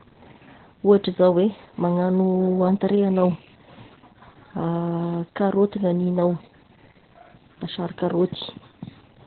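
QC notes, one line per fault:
Throughout: Opus voice compression. The speech is muffled, with nothing above 4.4 kHz. The codec has dropped to narrowband and kept only the low band. Speech also sounds hoarse and slightly robotic. The SILK linear-prediction coder models the voice with a filter and codes the excitation feeding it very coarsely, so fine detail in the voice is lost. The damage is heavy, which fits a bitrate near 8 kbps.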